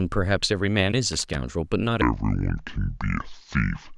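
At 1.13 s a burst of loose connector crackle runs to 1.35 s. A worn contact is making and breaking as it moves. The speech is chopped into irregular scratching.

From 2.02 s to the end, the section is at the wrong speed. It plays at 0.6 times its recorded rate. Pitch drops by about ten semitones, so the voice turns deep and slow. A mismatched playback clock is the likely cause.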